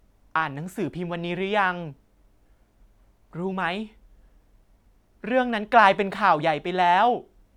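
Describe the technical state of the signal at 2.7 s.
At 2.7 s the speech sits inside a drift correction step running from 2.62 to 3.52 s, likely a clock-matching resampler briefly speeding playback by 5.7% to rebalance its buffer. The sound rises nearly a semitone, then snaps back. On a spectrogram, harmonics jump upward together, then drop abruptly.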